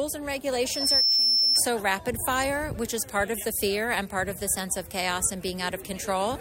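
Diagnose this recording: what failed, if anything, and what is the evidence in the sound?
Loudspeaker feedback squeal, in the acoustic loop between playback and microphone, runs from 0.65 s to 1.66 s. A single 5.3 kHz tone swells over roughly 0.4 s to about 5 dB above the audio. On a spectrogram it appears as one brightening horizontal line. Loop gain exceeded unity at that frequency.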